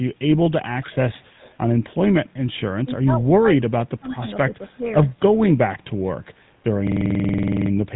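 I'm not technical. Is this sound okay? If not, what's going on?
No. The whole recording has passed through the GSM full-rate codec, the original digital mobile phone coding. It rebuilds the voice from a simplified model driven by regular pulses, which gives the speech a buzzy, gravelly roughness that is plainly audible here. It also cuts everything above 3.9 kHz, so the speech sounds narrow and muffled. The microphone processing before the codec trims only the deepest bass, which is normal.

There is an echo leak from 0.81 to 0.95 s and again from 1.12 to 1.58 s. A faint, delayed copy of the speech trails about 0.29 s behind the original, quieter still in the second stretch. The likely cause is a speakerphone on one end: its echo canceller did not fully remove what its microphone picked up from the loudspeaker, so part of it came back down the line.

Speech suppressed in double talk appears from 2.86 to 4.28 s and from 4.49 to 4.85 s. 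The voice sinks sharply in level, dipping deepest in the first stretch, where about a second is affected, with a milder dip in the second. This is likely because both people spoke at once, and the echo canceller, unable to separate the talker from the echo, turned everything down.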